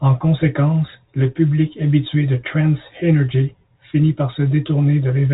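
No faults can be heard anywhere in this speech clip. It comes through G.711 telephone coding, so nothing reaches above about 3.8 kHz, and at most a faint level-following hiss rides under the voice.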